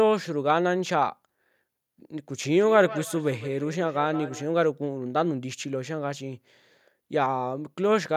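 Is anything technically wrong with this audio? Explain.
Yes. From 2.6 to 4.48 s there is feedback echo between two devices. One device plays what the other's microphone sent, and that microphone picks it up again. Neither echo canceller removes the other's playback. The speech returns roughly every 150 ms, about 14 dB below the direct sound.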